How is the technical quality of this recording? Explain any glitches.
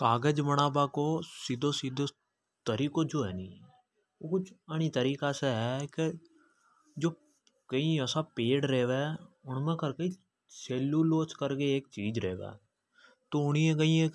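Nothing in the recording stood out as a technical problem on listening, so there are no glitches to explain.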